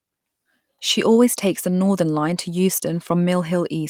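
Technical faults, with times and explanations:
Nothing stood out as a technical fault on listening to this speech recording.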